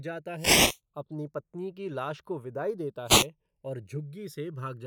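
Throughout, the two channels drift apart: separate device clocks let the inter-channel delay slide to under a millisecond, so mono comb notches sweep as slow flanging. From 0.35 to 0.80 s, just before "अपनी पत्नी की लाश", and again from 3.05 to 3.27 s, after "विदाई देता", there are wireless microphone noise hits: the FM radio link fades and receiver noise surges up as a brief swish of static over the speech.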